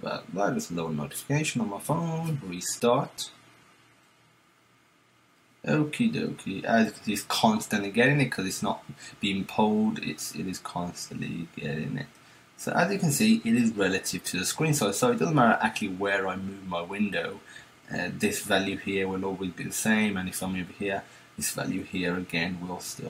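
From 2.33 s to 4.33 s the adaptive stream switches to a lower bitrate, which points to a fall from roughly 96 to 48 kbit/s AAC, as the connection slowed. Codec artefacts rise for those two seconds, with the quality shifting abruptly at both ends and no gap in the audio.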